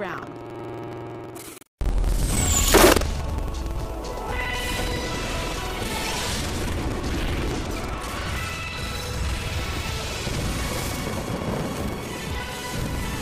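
Buffer tearing runs through the whole clip: a buzz or rattle at 21.5 Hz, which fits a 2048-sample buffer, because about a third of each period replays audio roughly a tenth of a second old. Unlike dropouts, nothing falls silent, and the buzz disappears when the sound stops.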